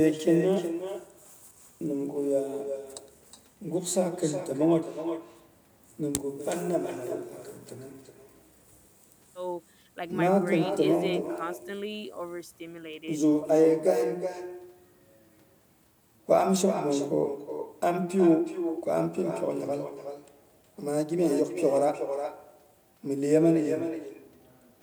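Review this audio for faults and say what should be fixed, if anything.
Echo with no canceller runs throughout: every phrase returns about 9 dB quieter, roughly 400 ms later, as a distinct thin repeat rather than the smooth tail of room reverb. Enabling acoustic echo cancellation at the far end, or having that side use a headset, would stop its loudspeaker feeding the microphone.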